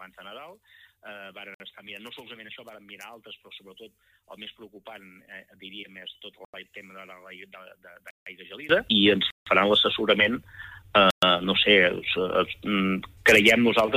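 From the start until about 8.69 s, the mono sum drops by about 23 dB and turns faint, with the centre of the sound all but gone. That's likely one channel inverted, so the shared content cancels and only the side difference remains. Layered on top are blocks of digital silence: hard dropouts at 1.54 s (56 ms), 6.45 s (88 ms), 8.11 s (160 ms), 9.31 s (160 ms) and 11.11 s (120 ms). Each is a run of silence, presumably buffers that weren't filled in time, so the audio snaps off and back with no fade. Each one opens up as a brief hole.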